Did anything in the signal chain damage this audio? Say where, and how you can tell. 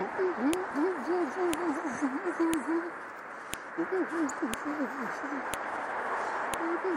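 Yes. File header played as audio, from joining stored pieces. Sharp clicks at 0.53, 1.54, 2.54, 3.54, 4.54, 5.54 and 6.54 s. The one-second spacing shows unstripped headers playing as samples.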